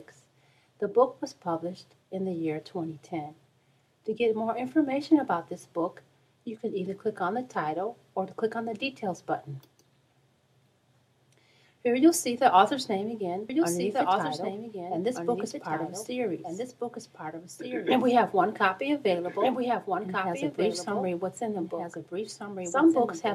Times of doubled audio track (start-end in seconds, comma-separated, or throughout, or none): 13.49-23.34